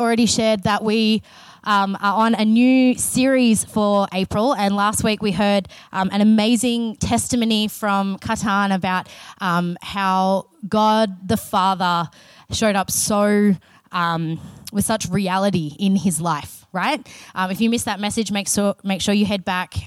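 Nothing technically wrong can be heard anywhere in this audio. There are no faults to time or trace to a cause.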